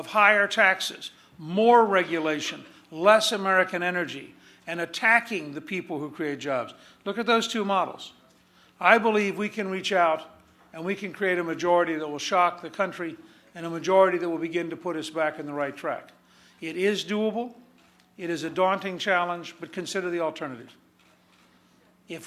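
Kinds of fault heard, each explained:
No kinds of fault are heard in this clip.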